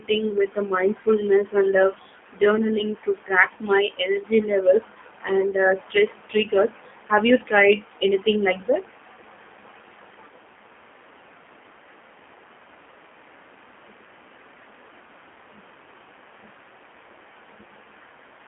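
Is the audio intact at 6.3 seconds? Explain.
No. At 6.3 seconds the speech carries G.729 codec damage, as it does for the whole clip. The codec does not store the waveform. It rebuilds each 10 ms frame from a vocal tract filter, a pitch predictor and a few pulses, which fits an 8 kbit/s stream. The line passes only about 200 Hz to 3.5 kHz, so the sound is thin and muffled. The damage is plainly audible, with a rough, synthetic edge.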